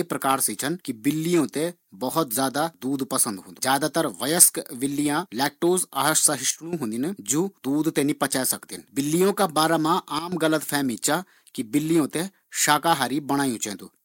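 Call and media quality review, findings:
Sudden gain jump: level and noise floor drop together, about 12 dB at 6.51–6.73 s (before "होदिन जु दूध ते") and about 11 dB at 10.19–10.32 s. Likely an unramped digital gain step; waveform envelope steps down abruptly, spectrogram darkens evenly across all frequencies.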